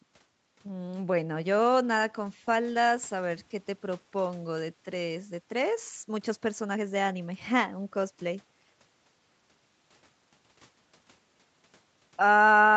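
Nothing's wrong with this one: it's speech that went through an ordinary call path, and the top end stops at around 8 kHz as you'd expect from a call codec set to that bandwidth, with no technical faults anywhere.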